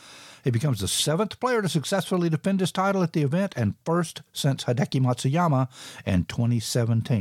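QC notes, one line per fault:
No faults found in this speech recording.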